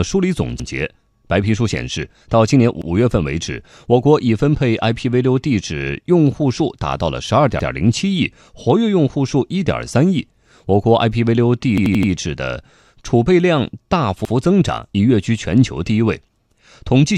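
Repeated buffers occur when fresh audio misses its deadline and the device replays its last block of roughly 85 ms, which fits a 4096-sample buffer. The speech stutters once at 0.60, 2.82, 7.60 and 14.25 s, and four times in a row from 11.78 to 12.12 s, each join abrupt, with nothing apparently skipped.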